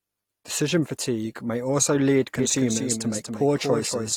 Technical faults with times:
2.39-4.17 doubled audio track

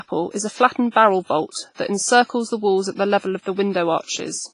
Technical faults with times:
0.00-4.53 WMA compression

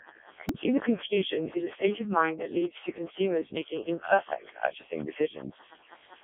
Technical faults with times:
0.00-6.23 Wi-Fi interference
0.00-6.23 Codec 2 vocoder
0.49 repeated buffer

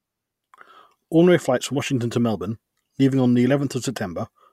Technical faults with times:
none

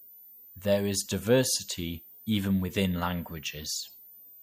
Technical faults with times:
0.00-4.42 switching supply whistle
1.75 corrupt frame decoded

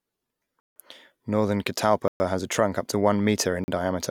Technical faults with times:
0.60-0.76 block of digital silence
2.08-2.20 block of digital silence
3.64-3.68 block of digital silence

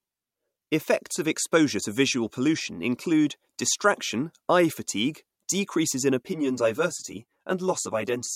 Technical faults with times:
6.28-8.35 channel delay (comb filtering)

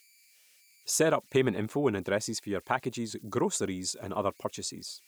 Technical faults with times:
0.00-5.07 converter idle tones

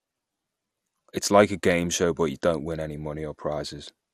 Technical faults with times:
0.00-4.14 MP2 compression

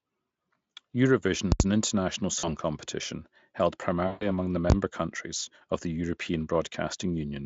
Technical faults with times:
1.52-1.60 invalid numbers at full scale
2.39-2.49 VoIP packet loss concealed by the speech codec
4.07-4.26 VoIP packet loss concealed by the speech codec
4.70 invalid numbers at full scale

